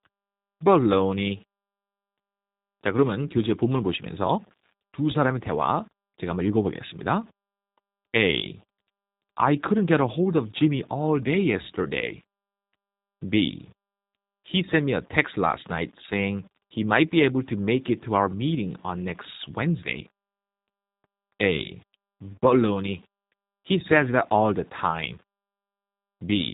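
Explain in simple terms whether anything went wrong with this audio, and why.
Two problems run through the whole speech recording, from start to finish.

The first is the G.729 codec, a low-data phone-call format that rebuilds speech from a simplified model of the voice instead of storing the actual waveform. Nothing above about 3.8 kHz survives, so the sound is muffled and boxy, like a phone line. The rebuilding is plainly audible: consonants and vowels come out rough and slightly synthetic, with a buzzy, artificial edge.

The second is a constant fine grit that rises and falls with the speech itself, getting more noticeable as the sound gets quieter. This points to low bit depth without dither. The signal was likely stored with only about 9 bits and simply rounded, with no added noise to smooth the steps, so the rounding error tracks the speech and turns quiet passages grainy rather than clean.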